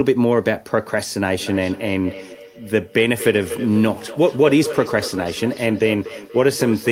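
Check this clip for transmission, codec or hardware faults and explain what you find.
One fault is present: a feedback echo between two devices, running from 1.39 s to the end of the speech. Each syllable returns roughly a fifth of a second later, at most about 13 dB below the direct sound. A second device in the room replays the call audio into a microphone, and that device's echo canceller only removes its own playback. On a waveform, each burst carries a trailing copy; a spectrogram shows each onset doubled at that fixed offset.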